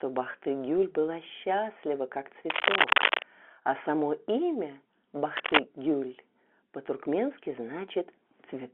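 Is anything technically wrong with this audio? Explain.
Yes, there are two kinds of fault in this speech.

From 0.32 to 0.34 s there is packet loss with pitch repetition: a single 20 ms stretch of audio went missing, and the receiver filled the gap by repeating the last pitch cycle. That brief patch sounds like a slightly held, buzzy note before the speech resumes.

From 2.50 to 3.23 s and again from 5.35 to 5.59 s there is cable scratch noise, most likely from a worn cable or connector being moved so its contact resistance fluctuated rapidly. Dense, uneven bursts of scratching sit a little louder than the speech for those moments.

The audio is band-limited to roughly 250 Hz to 3.4 kHz, as expected for G.711 telephone coding on the line.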